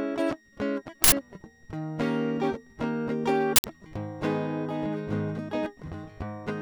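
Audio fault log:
Throughout: switching supply whistle. There's a thin high whistle sitting about 30 dB under the music, wandering around 1.86 to 1.89 kHz. That's a switching power supply dropping into an audible burst mode, or two supplies beating against each other, so the pitch shifts slightly as the load changes. It's quiet, but it sits right in a sensitive band.
1.04 to 1.12 s and 3.56 to 3.64 s: uninitialised buffer. Each one is an 80 ms slam of harsh digital noise. The buffer got played before any audio was written into it, so whatever junk was sitting in memory came out as samples. It's the same block length both times.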